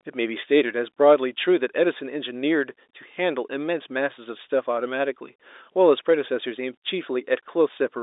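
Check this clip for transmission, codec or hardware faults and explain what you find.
No transmission, codec or hardware fault is audible in this speech clip; the G.711 telephone coding behaves as that path should, with the sound confined to a band of roughly 300 Hz to 3.7 kHz and only faint coding noise riding under the signal.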